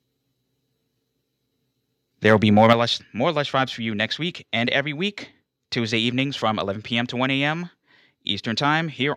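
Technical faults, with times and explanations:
2.25–2.73 s, microphone overload: the loudest speech peaks, about 2 dB over full scale, have their tops sheared off, giving a harsh crackle just before "lush more lush vibes". The likely cause is input gain set too high. On the waveform the peaks flatten into plateaus, and the spectrogram shows broadband smear above them.
2.73 s, microphone volume stepped down: right after the distorted stretch, the speech and the background together drop by about 6 dB in a single step, just before "lush more lush vibes". This likely comes from the call software cutting the input volume in reaction to the clipping. The waveform envelope shrinks abruptly, and the whole spectrogram dims at once.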